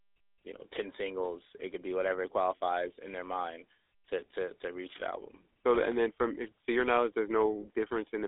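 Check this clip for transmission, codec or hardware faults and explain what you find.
One fault runs through the whole speech clip: GSM full-rate codec coding. The speech is modelled as a vocal-tract filter excited by a sparse, regularly spaced pulse train, with only every third excitation sample kept, which fits a bitrate of 13 kbps. The damage is plainly audible as a buzzy, gravelly roughness on the speech. The band sits at about 300 Hz to 3.6 kHz on the line, and nothing is present above 3.8 kHz.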